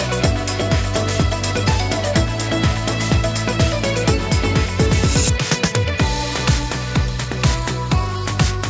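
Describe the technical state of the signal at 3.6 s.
At 3.6 s the audio is intact, with no fault; it carries the ordinary character of a call path, with nothing above 8 kHz, consistent with a G.722 call codec.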